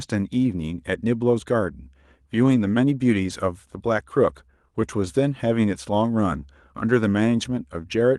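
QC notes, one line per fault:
2.43–2.69 s, lost packet rebuilt from error correction: about 140 ms turns briefly rougher and noisier with no gap, which fits several lost packets replaced by lower-bitrate copies carried in later Opus packets. Unlike concealment guessing, nothing sounds smeared or repeated. The 12 kHz call bandwidth is unchanged.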